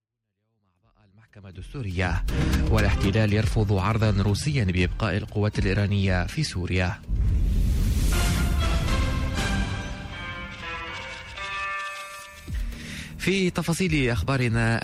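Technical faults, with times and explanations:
Nothing to flag here; the sound just eases in with a smooth fade from the very start, reaching full level by about 2.06 s, and there are no technical faults after that.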